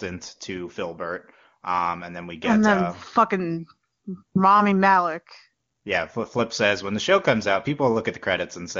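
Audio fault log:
The speech comes through an AMR wideband (HD Voice) path whose band reaches about 7 kHz with at most faint coding texture, which fits the codec's top 23.85 kbit/s mode, and no faults are present.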